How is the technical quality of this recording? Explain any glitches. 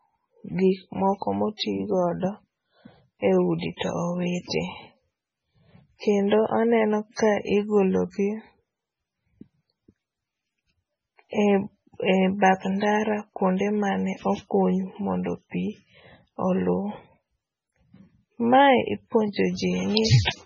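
Quality is poor, with heavy codec damage across the whole clip and one smeared attack. Lossy compression, likely MP3, runs throughout: nothing above about 9.1 kHz, and weak frequency lines flicker frame to frame, giving watery, swirly speech and smeared attacks, consistent with a very low bitrate near 16 kbps. Pre-echo appears at 3.58 to 3.62 s: the codec spread its quantisation noise across the block, so a short 40 ms hiss arrives before an attack, which sounds softened.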